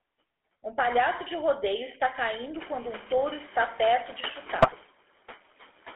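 From the start, noise suppressor artifacts are present. The suppressor pulls steady noise down by about 15 dB, frame by frame. Between phrases the background sinks. Under the speech it swells back.

The GSM full-rate codec also runs throughout. The sound points to a 13 kbps link. The band is confined to 300 Hz to 3.4 kHz, so nothing bright survives. The pulse-driven excitation gives the speech a plainly audible buzzy, gravelly roughness.

Around 2.5 s the room noise rises by about 25 dB. It then sits about 16 dB below the speech.

From 4.58 to 4.73 s, GSM bit errors strike. Corrupted bits reach the decoder across several consecutive frames. Wrong filter, pitch and gain values twist the spectrum and spike the level. The speech breaks into a brief squawking, gargling burst with pops.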